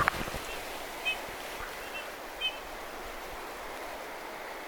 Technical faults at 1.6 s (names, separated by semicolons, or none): compressed frames skipped